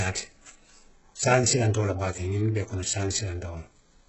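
From start to finish the speech carries heavy damage that's likely HE-AAC compression, and the kind you'd expect from a very low bitrate, something like 8 kbps. Nothing comes through above 8 kHz, and the treble below that cutoff has been rebuilt by copying lower bands upward rather than coded properly. Its harmonics don't line up with the real ones, so the s sounds come out gritty, metallic or lispy.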